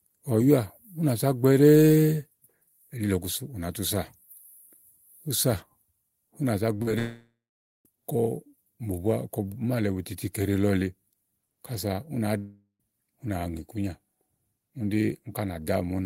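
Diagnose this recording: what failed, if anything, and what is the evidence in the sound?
The network stage dropped packets repeatedly from 6.74 to 6.94 s, right after "ù nà za": five gaps, the longest 42 ms, about 80 ms lost in all. Concealment patched 43% of that stretch by extending prior sound, giving choppy, robotic speech with pieces missing.

Twice the speech stops outright, and a long network dropout is the likely cause. From 6.99 to 7.86 s, about 870 ms never arrived. The concealed tail fades into 0.5 s of silence. At 12.38 to 12.81 s, after "ù nàá", 410 ms vanish, ending in 110 ms of silence.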